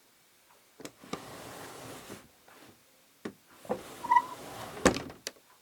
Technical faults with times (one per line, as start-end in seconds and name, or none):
none